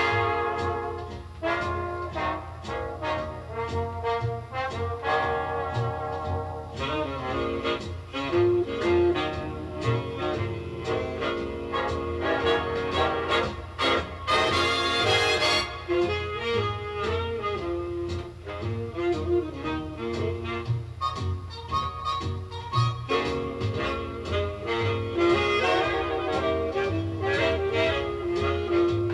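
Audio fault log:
No faults are heard in this recording.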